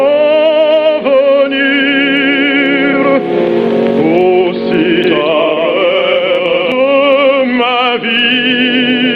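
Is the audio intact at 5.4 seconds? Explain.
No. At 5.4 seconds a doubled audio track is sounding. From 5.04 to 6.72 s a second full-band copy of the sound trails the original by about a fifth of a second, at roughly the same level. It is likely the same signal mixed in twice, through a slower capture path or two misaligned copies in an edit. Unlike an echo or reverb, the copy has no decay and no room colour, and it starts and stops abruptly at the edges of that span.

Gain pumping is also present at this moment, as it is through the whole clip. The gain swings by as much as about 20 dB, so loud and soft parts sit squashed close together. The likely cause is gain set far too high, with a fast limiter or compressor clamping down on every peak.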